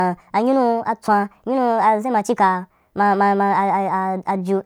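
A wrong sample rate throughout, consistent with 32 kHz audio played at 44.1 kHz, makes the speech 1.38 times faster and 5.55 semitones higher, hurried and shrill.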